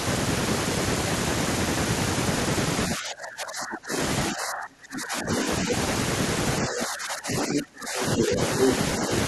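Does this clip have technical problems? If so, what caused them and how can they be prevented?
Yes. Speech suppressed in double talk occurs from 2.95 to 3.94 s, 4.31 to 5.46 s, 6.62 to 8.4 s and briefly from 8.98 to 9.11 s. The level drops by roughly 20 to 30 dB in the longer spans and only slightly at the end. The likely cause is an echo canceller that, with both parties talking, could not distinguish the talker from loudspeaker echo and attenuated everything. A waveform shows the envelope pinched to a thin band. Prevention: use a canceller with proper double-talk detection and gentler suppression.

The other side's voice leaking through appears from 8.18 to 8.36 s at roughly the talker's own level, and from 8.63 to 8.73 s somewhat louder. These are short scraps of a second voice, likely residual loudspeaker sound that the echo canceller did not fully remove from the microphone. A spectrogram shows brief harmonic fragments that do not follow the talker's pitch, and a waveform shows isolated bursts. 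Prevention: use headphones, or lower the speaker volume and let the canceller converge.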